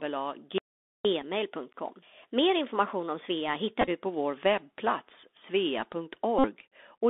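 The Bluetooth CVSD headset codec shapes the whole clip. Its band runs only from 250 Hz to 3.6 kHz. A one-bit delta coder follows the waveform with an adapting step. The damage is plainly audible: granular hiss, scratchy s sounds, and distortion on loud high sounds.

At 0.58 s a playback stall begins. The sound stops mid-flow. Silence lasts until 1.05 s, about 467 ms. The player likely ran out of data or had its thread blocked. Then the sound resumes.

From 1.05 s to 4.05 s comes catch-up at higher speed. The player resamples its backlog to run 1.1 times fast. Pitch rises by about one and a half semitones. It begins just before "vår webbplats".

Each Bluetooth headset packet repeated event means lost packets were replaced by decoding the previous packet's bits again. At 1.22 s this gives a brief buzz. About 11 ms is lost, which fits three packets. From 3.81 s to 3.89 s the repeats scatter over 60 ms, with the longest run around 15 ms. 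From 6.39 s to 6.47 s, 52.5 ms is lost. The repeat every 3.75 ms makes a steady buzz near 267 Hz.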